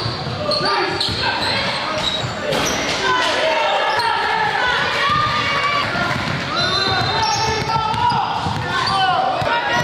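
Five short glitches break into the audio, each a brief squawk or blip, at 2.21, 3.97, 5.83, 7.69 and 9.45 s, spaced roughly every 1.8 s. The cause is damaged data in a compressed stream. At each of those points some bytes of the encoded file were lost, zeroed or overwritten. The decoder misread the affected frame, lost sync and had to hunt for the next valid frame header before playback could continue cleanly.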